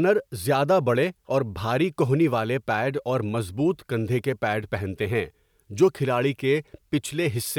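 No technical faults can be heard anywhere in this recording.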